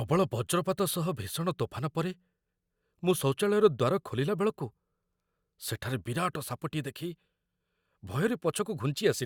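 No technical faults are audible.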